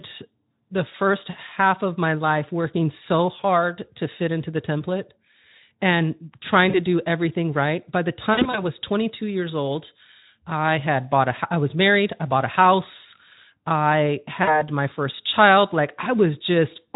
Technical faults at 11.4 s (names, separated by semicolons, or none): none